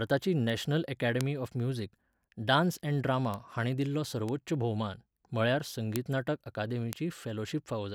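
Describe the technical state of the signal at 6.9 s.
At 6.93 s the speech carries a bit error spike: a flipped bit in two adjacent samples throws the value by a power of two, peaking at about -12 dBFS, then snaps back. It sounds like a single sharp, broadband tick unrelated to the speech.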